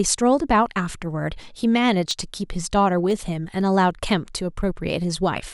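From 2.11 s to about 4.61 s, the speech carries periodic USB or driver dropouts. About seven tiny gaps occur, spaced exactly 0.5 s apart. At each one, something blocks the audio path briefly and a sliver of signal is skipped, far less than a millisecond. The waveform jumps across the gap, leaving a small discontinuity. Each one is heard as an evenly timed tick over the speech.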